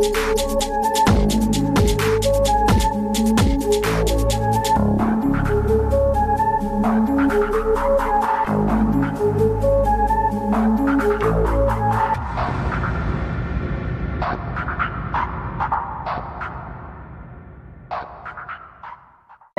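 Overlap between stream segments at 8.25 s: overlapping 4-second segment timestamps caused about 18 ms of sound to be trimmed, leaving a waveform jump heard as a tiny skip.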